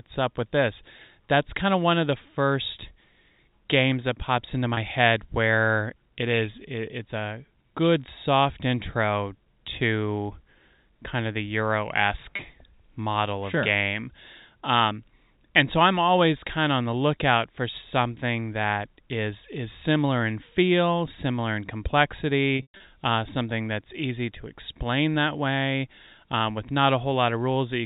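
Speech carried over G.711 A-law telephone coding, with three glitches from packet loss with pitch repetition. They occur at 4.74–4.77 s after "games that pops into", at 12.36–12.39 s before "model of sure game", and at 22.56–22.80 s before "uh something that's easy". The first two each bridge a 30 ms gap, which fits a single lost packet. The third scatters 180 ms of losses over 240 ms, the longest run being 120 ms. In each gap the receiver repeated the last pitch period.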